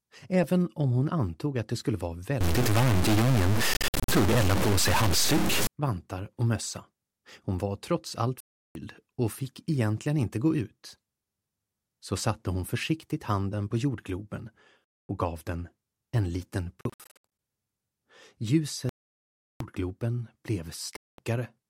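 From 2.41 to 5.67 s the sound turns distorted, with a gritty hiss filling the quieter moments. This is a stuck bit: one data bit was likely held at a fixed value, so about half the samples are off by that bit's weight.

Overlapping this, from 3.74 to 4.09 s, the sound breaks into silent gaps. About 218 ms is lost across 348 ms, and the longest gap is 58 ms. Further holes follow at 8.40 to 8.75 s, at 15.08 s, and at 16.81 to 17.25 s, where about 334 ms is lost across 581 ms and the longest gap is 73 ms. The longest single gap runs from 18.89 to 19.61 s and lasts about 0.7 s, and a final one comes at 20.97 to 21.18 s. After each gap the sound picks up further along, as if it had kept playing. These are Bluetooth dropouts: audio packets likely failed to reach the headphones in time and were discarded.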